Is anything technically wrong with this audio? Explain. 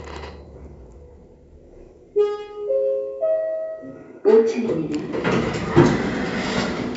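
No, the signal shows no technical fault: it has passed through a call's microphone processing, which limits its content to below 8 kHz and trims the deepest bass as intended.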